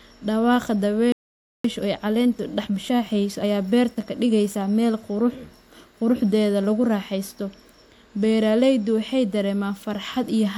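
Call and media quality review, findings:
Playback stall, 1.12–1.64 s: speech cuts off mid-flow, silent for about 0.52 s, then resumes. Waveform flat; spectrogram shows a clean blank vertical band across all frequencies. Likely buffer underrun or blocked audio thread starving the output.

Time-compressed catch-up, 1.64–4.64 s: speech hurried to 1.1x at normal pitch. Player trimming its backlog by dropping and cross-fading short segments. Spectrogram: harmonic spacing unchanged, syllables packed tighter; waveform shows small splice seams.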